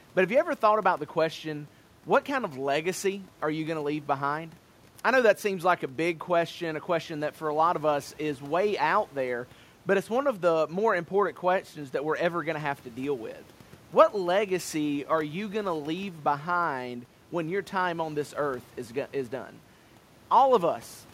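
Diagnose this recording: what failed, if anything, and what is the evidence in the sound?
Nothing failed: no stage in the chain leaves an audible fault anywhere in the speech.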